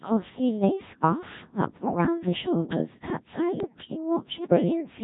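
Throughout, the speech passes through a Codec 2 vocoder at what sounds like its 1.3 kbit/s mode. Only the pitch, voicing, energy and spectral envelope are sent. The decoder then rebuilds the voice from sine waves rather than keeping the original waveform. The damage is heavy: the whole clip sounds robotic and buzzy, with the natural texture of the voice replaced by a synthetic, harmonic drone.

From 1.81 to 2.06 s, bit errors on digital voice radio corrupt the vocoder's data, at a rate of roughly a few percent. At such a low bitrate each flipped bit alters the pitch, level, voicing or spectral shape of a whole frame. The quarter-second span, about five frames, lurches in pitch and loudness and breaks into warbling, garbled tones.

From 3.60 to 3.78 s, a second burst of bit errors hits about three frames, this time at a heavier rate, around 7 percent. The synthetic voice again jumps erratically in pitch and tone colour, and the sound briefly collapses into bleeps and robotic gibberish.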